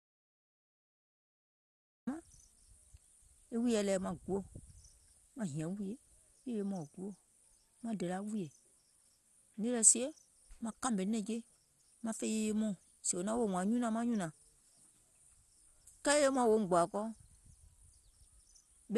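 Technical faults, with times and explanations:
0.00–2.07 s, audio dropout to silence: the clip opens in dead silence with no room tone, likely a lost input while recording carried on.
Throughout, MP2 compression: speech sounds dull and gurgling with nothing above 12.2 kHz, likely MPEG Layer II coding near 64 kbps switching off upper sub-bands.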